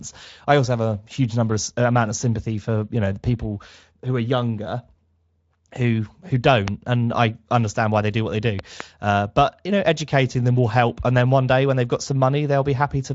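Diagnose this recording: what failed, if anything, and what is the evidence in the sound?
Loud pop at 6.68 s, after "who who", and a double pop from 8.59 to 8.82 s, after "do what they do", peaking about 20 dB and 15 dB above the speech, which continues underneath. A voltage step in the analogue wiring, likely from a plug or switch, was added to the signal.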